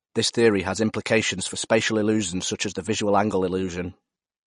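Throughout, the speech carries likely MP3 compression: treble stops dead above about 10.6 kHz, suggesting a low bitrate around 40 kbps, sounding watery and swirly, with spectrogram energy flickering in patches below a flat ceiling.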